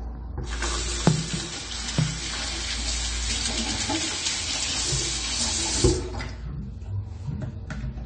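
A short recording of sounds carries AAC compression damage from start to finish. Nothing reaches above 9 kHz, and the coding artefacts are plainly audible throughout. Unlike a simple low-pass filter, which dulls the top end but leaves what remains clean, this damage is in the sound itself. Both the cut-off and the degree of damage fit AAC-LC at around 32 kbps, which is the likely cause.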